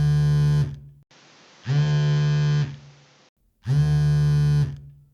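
A recording of everyday sounds that turns dull and boxy from 1.03 s to 3.37 s, with nothing above 7.6 kHz and a faint, different background hiss sitting well beneath the sound, before the full brightness returns. A short dropout of about 80 ms marks the switch, while loudness stays roughly the same. This is likely an input switched to a poorer device partway through recording: a narrower-band microphone or headset path took over, bringing its own bandwidth limit and noise floor.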